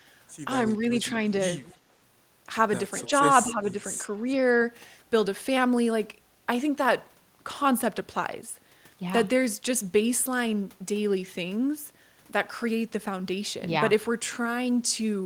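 Speech suppressed in double talk at 0.58 to 0.99 s: the voice dips by about 5 dB, likely because an echo canceller could not separate the talker from overlapping loudspeaker echo and pulled both down. Echo leak at 1.63 to 1.78 s: a faint copy of the voice returns 238 ms late, about 25 dB below the speech, likely loudspeaker pickup the canceller failed to remove. It recurs at 3.01 to 3.10 s, about 20 dB down, and at 3.48 to 3.54 s, about 15 dB down. Speech suppressed in double talk at 3.50 to 3.82 s: the voice drops about 10 dB while the other side is active, likely gating during double talk. It recurs more lightly at 4.31 to 4.66 s, with a dip of about 5 dB.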